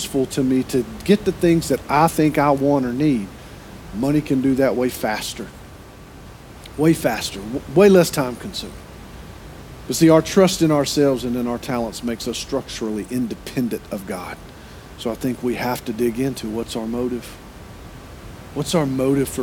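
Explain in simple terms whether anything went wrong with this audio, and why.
Nothing went wrong with this audio; the background noise is simply the sound of the room it was recorded in.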